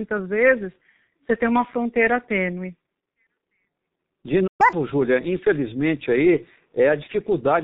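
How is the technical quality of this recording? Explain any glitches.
Technical quality is poor: heavy codec damage runs through the whole recording, and a brief dropout in the second half is followed by a fast, high-pitched burst.

G.723.1 codec, throughout: This low-rate telephony codec works in 30 ms frames at a bitrate the sound suggests is around 6 kbit/s, and it discards everything above 4 kHz. The speech sounds muffled and hoarse, with smeared consonants. A spectrogram shows a flat ceiling at 4 kHz and coarse, blocky formant bands.

Playback stall, 4.47 to 4.61 s: The output goes silent in mid-flow for about 0.12 s, most likely because the player ran out of buffered data or its thread was blocked. The waveform shows an abrupt flat line, and the spectrogram shows a clean vertical gap.

Catch-up at higher speed, 4.61 to 4.73 s: After the gap, the player resamples its backlog to recover the lost time, playing at double speed. 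Pitch jumps by roughly ten semitones before returning to normal. Harmonics spread upward on a spectrogram, and waveform cycles appear compressed.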